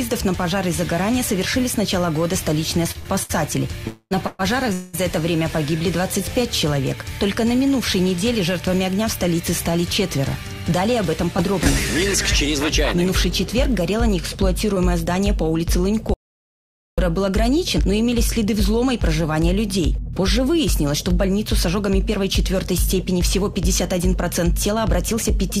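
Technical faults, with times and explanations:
2.91–4.41 s, repeated stalls (stutter): the sound drags and hiccups four times, the longest hold about 122 ms and 281 ms stretched in all, with nothing lost. Packets kept arriving late, so the jitter buffer repeatedly emptied and the receiver extended the last sound until data resumed.
3.87–4.13 s and 4.73–4.95 s, call audio freeze: the sound hangs as a fading continuation for 235 ms and then 203 ms, the first trailing into about 30 ms of silence, before picking up where it stopped. Delayed packets likely drained the jitter buffer, inserting gaps without losing content.
10.18–25.32 s, jitter buffer speed-up: the audio runs about 2% fast at unchanged pitch, with roughly 0.4 s trimmed in total. The buffer held more than its target, so the receiver cut many short pitch-period slices in succession to reduce delay.
11.38–11.40 s, 11.64–11.67 s and 14.75–14.78 s, short concealed packet loss: each is a brief smear or wobble where 20 ms of audio never reached the decoder in time. 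The receiver patched each hole by extending the preceding sound, then blended back into the real signal.
16.14–16.98 s, audio dropout to silence: the sound cuts off abruptly into about 0.84 s of silence, with no background noise, then returns mid-flow. The input was likely lost briefly while the recorder kept writing silence, so whatever occurred in that span is gone.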